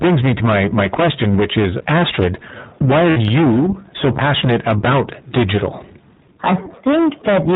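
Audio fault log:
throughout, hard clipping: Some stage in the chain was driven roughly 20 dB beyond what it could pass, so every louder stretch of speech slams into the ceiling and has its peaks sliced flat. With something like a third of the waveform pinned at the limit, the squared-off tops throw a dense spray of high harmonics across the band, and the speech carries a constant harsh, buzzy fuzz on anything above a quiet level.
throughout, iLBC codec: The speech went through the iLBC narrowband VoIP codec. The sound fits a rate of about 15.2 kbps with 20 ms frames. The codec keeps nothing above 4 kHz, which leaves the speech dull and boxed-in. It also rebuilds each frame's excitation on its own, so the codec damage is plainly audible as a rough, slightly synthetic grain.
3.10–3.18 s, lost iLBC frames: Right after "is astrid why are", packets went missing for 60 ms, which fits three 20 ms frames. 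The decoder filled the hole by repeating the last pitch cycle blended with noise. The result is a short held, buzzy-breathy vowel smeared over what should be changing speech. Because each iLBC frame decodes independently, the speech snaps back cleanly as soon as packets arrive again.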